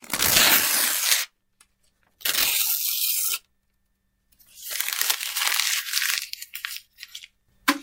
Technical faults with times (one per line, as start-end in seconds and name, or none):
none